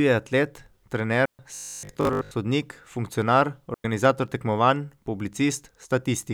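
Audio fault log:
1.25–1.39 s: digital wireless dropout. The link lost too much data and the receiver muted for 135 ms, leaving a clean hole with no noise on either side.
1.55–2.33 s: robotic sound from repeated short buffers. The sound becomes a rigid metallic buzz at 50 Hz, likely from a 20 ms buffer being replayed while most of the real audio was skipped.
3.74–3.85 s: digital wireless dropout. The receiver muted for 106 ms after data loss, giving a short, near-silent gap with no burst of noise around it.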